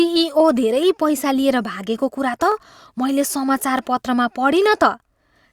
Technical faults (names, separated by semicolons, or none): dropped samples